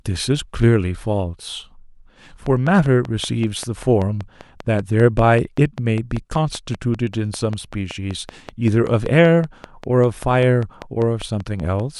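Speech with a train of clicks over it from 2.46 s right through to 11.81 s: about 5.1 regularly spaced ticks per second, so roughly fifty in all, each with much the same sharp shape and peaking a few dB above the speech itself. They carry straight through the pauses, so they're riding on top of the signal rather than coming from the talker. The steady pulse most likely comes from nearby equipment or a faulty connection or power supply.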